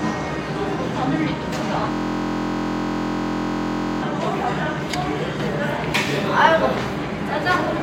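An everyday-sound recording that freezes into a system hang loop from 1.92 to 4.03 s. A single 23.22 ms slice repeats, buzzing steadily at 43.1 Hz, which fits a 1024-sample ring buffer replaying while the system hung. Unlike mains hum, it starts and stops abruptly.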